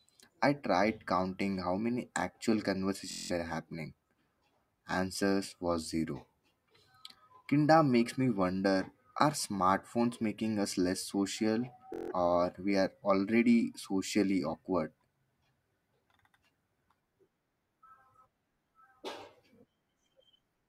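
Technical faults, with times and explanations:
3.11–3.32 s and 11.94–12.12 s, Bluetooth stutter: late packets made the receiver loop its last slice, giving a short buzz, then audio skips ahead.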